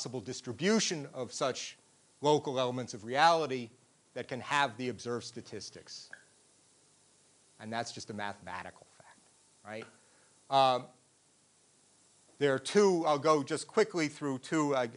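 Listening closely, nothing in the audio stood out as a technical fault.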